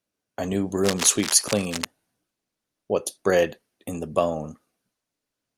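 From 0.84 to 1.86 s, a burst of cable scratch noise runs over the speech. It sounds like scratching and rustling. The bursts are dense and uneven, and they sit roughly 10 dB below the speech level. The likely cause is a worn cable, connector or control being moved. Its contact resistance jumps about rapidly as it shifts. Each jump injects a ragged spurt of noise into the signal. The scratching stops after about one second.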